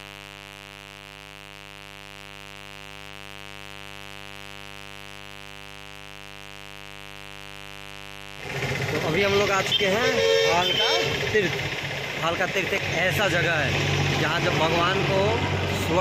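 A steady, raspy mains buzz runs the whole way through, built on 50 Hz harmonics from switching spikes leaking in, sitting roughly 20 dB under the sound.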